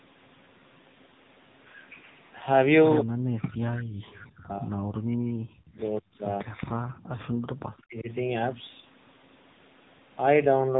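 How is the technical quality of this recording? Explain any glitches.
Technical quality is poor: the speech has heavy codec damage throughout, plus one brief dropout in the background.

AMR narrowband mobile codec, across the whole recording: the speech went through the 8 kHz mobile codec, and nothing above 3.8 kHz survives. The heavy damage makes the voice buzzy and synthetic. That points to a low bit mode, around 6.7 kbps, where few pulses model each frame.

Background gated by the echo canceller, 6.70 to 6.77 s: for a brief moment the room sound drops sharply, by about 38 dB at its deepest, then returns. This is likely the canceller clamping the microphone while it judged loudspeaker echo present. The call microphone processing's bass roll-off is ordinary.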